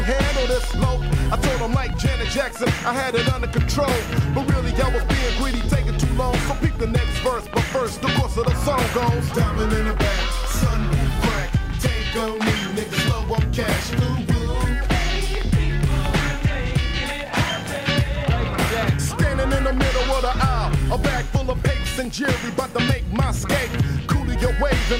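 No technical faults can be heard anywhere in this audio.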